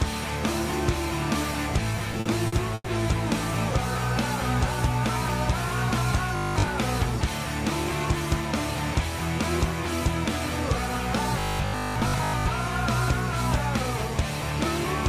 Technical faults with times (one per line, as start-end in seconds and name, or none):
1.95-2.87 repeated stalls (stutter)
6.36-6.68 robotic sound from repeated short buffers
11.40-12.46 robotic sound from repeated short buffers